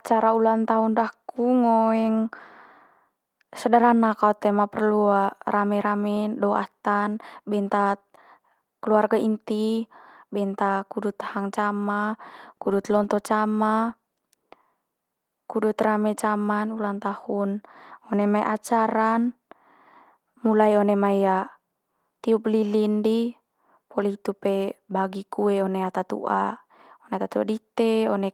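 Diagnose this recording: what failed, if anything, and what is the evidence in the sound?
Nothing in this speech recording points to a failure at any stage, and the Opus voice coding it went through, a 24 kbps hybrid stream, sounds just as you'd expect for that setting.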